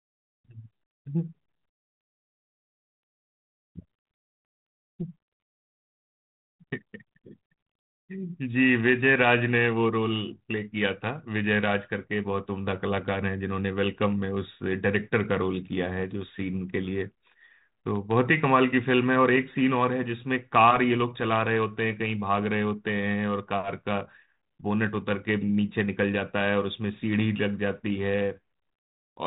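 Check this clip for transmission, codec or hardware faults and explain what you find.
Nothing stood out on listening to this speech clip, and the 32 kbit/s G.726 telephone path it travels through sounds as that path normally does.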